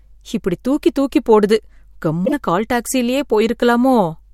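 Damaged data in a compressed stream appears from 2.22 to 2.33 s, just before "கால் டாக்சிலயே". For about 110 ms the speech is broken by the damaged frames. Part of the encoded stream at that point is corrupt, so the decoder either misinterprets the bad frames or discards them. It then loses its place in the bitstream and has to hunt for the next valid frame header before clean audio resumes.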